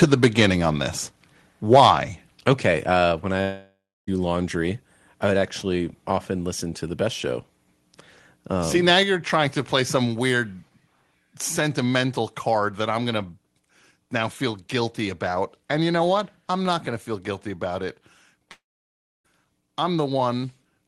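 Microphone overload at 0.02 to 0.46 s and again at 1.72 to 1.91 s: peaks reach about 4 dB past the converter's limit, likely from an input level set too high, so their tops are flattened. The loudest syllables gain a harsh crackle, lighter at first, with about 1.5% of samples clipped, and heavier in the second stretch, where about 7% of samples are clipped.

Microphone volume stepped down at 0.04 s, 3.12 s and 9.03 s: the level drops suddenly by about 2, 3 and 4 dB, voice and background together. This is likely the call software cutting the device's input gain in single steps after finding the microphone too loud.

Long network dropout at 3.41 to 4.09 s and 18.51 to 19.26 s: about 0.66 s and 0.74 s of sound never arrived, likely lost on the network. The receiver stretches the last sound into a fading buzz, then goes silent, for about 0.28 s in the first gap and 0.65 s in the second. The audio resumes without the missing part. 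Through the Opus call path, the sound tops out near 12 kHz.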